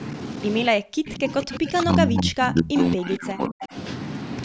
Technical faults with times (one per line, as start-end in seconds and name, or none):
0.69-3.75 speech suppressed in double talk
1.42-1.73 echo leak